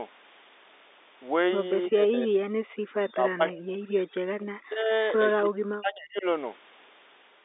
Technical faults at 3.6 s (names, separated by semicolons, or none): speech suppressed in double talk; echo leak